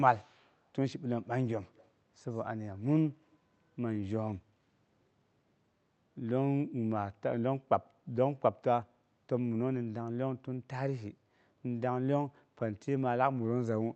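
Echo leak at 0.14 to 0.52 s, 1.75 to 1.89 s and 2.32 to 2.42 s: a faint copy of the speech trails the original by about 135 ms, sitting roughly 30 to 40 dB below it, so it comes across as brief ghostly scraps rather than a clear repeat. This is likely residual echo from a loudspeaker on one side of the call that its echo canceller failed to fully suppress and sent back down the call.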